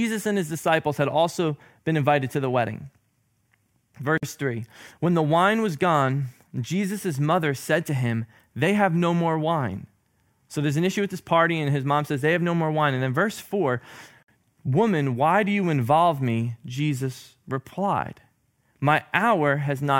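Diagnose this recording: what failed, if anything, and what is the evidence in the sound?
A gap at a join of encoded pieces opens at 4.18 s for 51 ms and at 14.23 s for 54 ms, about 10 s apart, in the codec stage. The speech stops, then resumes where it left off: separately encoded 10 s pieces were joined with their encoder delay and end padding left in.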